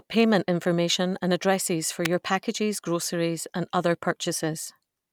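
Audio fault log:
2.05 s, electrical switching spike: right after "addresses for" and before "packages groceries and other" there's a sharp snap riding over the speech, peaking around -5 dBFS. That's likely a nearby switch or motor arcing briefly and the audio line picking it up.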